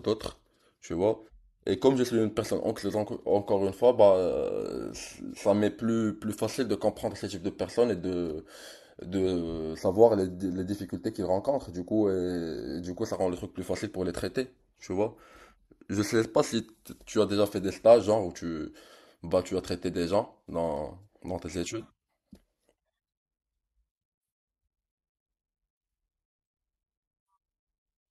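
From 9.79 to 13.13 s the speech turns hollow and phasey with channel delay (comb filtering). One channel arrives a fraction of a millisecond behind the other, and when the two are summed to mono the shared signal cancels at evenly spaced frequencies, the first dip landing around 3 kHz. Unlike a flanger's moving sweep, these notches stay fixed throughout, and unlike simple low-pass dullness, energy returns between the gaps rather than falling away steadily.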